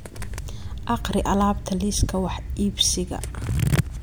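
No technical faults can be heard in the speech recording, and the signal stays steady and continuous throughout.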